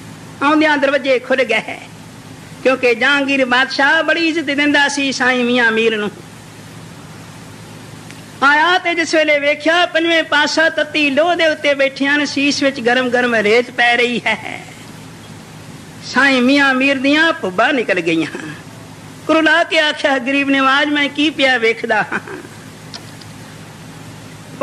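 No technical faults can be heard anywhere in the clip. Nothing in the audio breaks up, drops out or changes character at any point.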